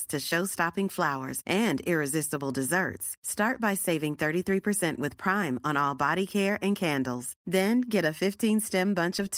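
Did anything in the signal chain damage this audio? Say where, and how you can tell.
No, nothing in this speech recording stood out on listening as damage from any stage of the signal chain.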